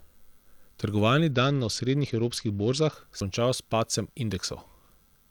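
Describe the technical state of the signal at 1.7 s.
At 1.7 s the speech is inside a Bluetooth SBC bit pool drop running from 1.31 to 2.92 s. The encoder is starved of bits, so the upper sub-bands go nearly empty and the rest are coarsely quantised, which fits a bit pool cut to about 9. Treble dulls and gritty noise rises.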